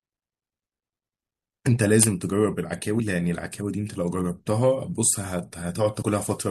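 At 2.99 s and again at 6.02 s, compressed frames are skipped: the speech jumps ahead by roughly 40 ms, which fits about two 21.3 ms frames lost or rejected. Unlike a dropout there is no silent gap.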